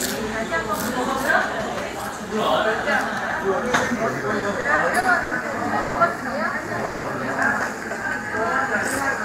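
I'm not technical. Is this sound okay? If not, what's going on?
No, there are a few glitches, all packed into a few seconds around the middle.

From 4.39 to 5.33 s you get repeated stalls (stutter). The sound catches five times, each hitch lasting up to 80 ms. About a fifth of that stretch is filler: the receiver kept stretching the last bit of sound while it waited for data that was arriving late. Nothing is actually lost, but it drags and stutters.

Then there are two short call audio freezes: one at 5.81 to 5.97 s (about 140 ms) and one at 6.85 to 7.06 s (about 190 ms). Each time, the sound briefly hangs on a buzzy or hissy continuation of what came just before, then picks up again right where it left off. The likely cause is data getting held up on the way, so the player ran dry and had to fill the wait.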